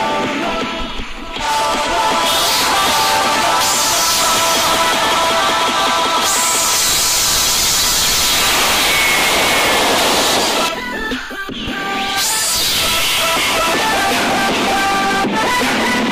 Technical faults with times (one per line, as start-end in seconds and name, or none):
1.73-10.69 doubled audio track